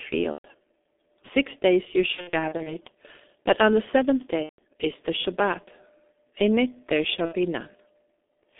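From start to finish the speech carries heavy G.723.1 codec damage. The line passes only about 250 Hz to 3.5 kHz, so it sounds muffled, and the slow-updating voice model leaves it hoarse with smeared consonants, which fits a 6.3 kbit/s setting. Simple band-limiting would sound dull but clean. This has the grainy, rough texture of a very low-rate vocoder.

VoIP packet loss concealed by the speech codec appears four times. At 0.32 to 0.47 s, about 120 ms of audio is replaced. At 2.12 to 2.76 s, just after "days you", losses are scattered over about 540 ms, none longer than 60 ms. At 4.43 to 4.60 s, between "but on the seventh" and "is the", 150 ms is lost. At 7.25 to 7.36 s, after "it there shall", 60 ms is lost. The decoder repeats its last pitch and filter with falling gain, and mutes from the third lost frame in a row. Each gap becomes a fading buzzy tone or coloured noise, and the speech recovers sluggishly afterwards. 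That sets it apart from a clean dropout or a hard click.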